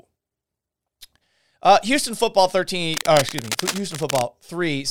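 At 2.92 s a burst of cable scratch noise cuts across the speech. It lasts about 1.3 s, ending at 4.22 s. It sounds like dense, uneven scratching and rustling laid over the speech. The bursts sit roughly 10 dB below the speech level. The likely cause is a worn cable or connector being moved. Its contact resistance jumps about rapidly, and those jumps enter the signal as noise.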